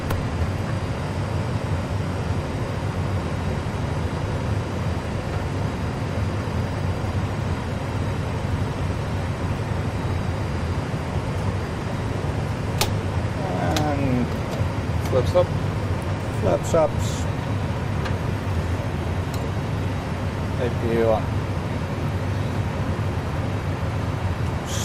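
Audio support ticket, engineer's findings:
Adaptive stream at a lower bitrate, 6.32–10.32 s. Sudden quality step down with more codec artefacts and no gap in playback; quality returns at 10.32 s. Probable cause is the player switching to a lower-bitrate rendition as the connection slowed; the sound fits Opus dropping from about 64 to 32 kbit/s.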